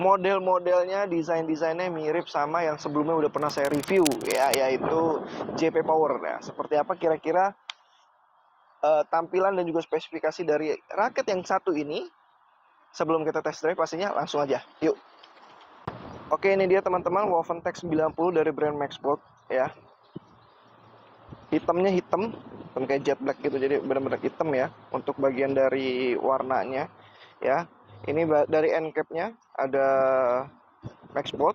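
From 3.38 to 4.55 s there's cable scratch noise, a fairly loud burst of uneven scratchy rustle about 10 dB under the sound, likely a worn cable or connector being moved.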